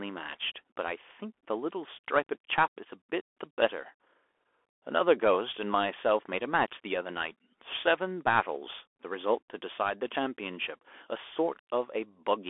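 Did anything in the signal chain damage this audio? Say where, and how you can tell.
Yes, in the codec. A Bluetooth CVSD headset codec runs throughout. Nothing passes above 3.8 kHz. Its one-bit steps leave scratchy s sounds and granular hiss.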